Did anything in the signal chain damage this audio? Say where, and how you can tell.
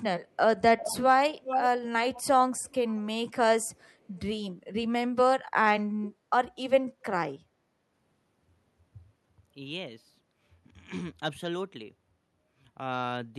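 Yes, in call processing. Speech suppressed in double talk appears at 0.58 to 0.62 s: the speech dips by roughly 15 dB for about 40 ms. The likely cause is an echo canceller that turned the talker down during overlap. It shows as a brief notch in the waveform envelope and a faint vertical gap on a spectrogram.

Echo leak follows at 0.78–0.97, 1.4–1.81, 2.14–2.24, 2.53–3.02 and 4.16–4.21 s, each a copy delayed by about 0.4 s. It is loudest near 1.4 s, around 5 dB below the speech, and fades to about 35 dB below by 4.2 s. On a spectrogram the harmonics repeat, fainter and offset. The likely cause is residual loudspeaker echo that the far side's canceller did not remove.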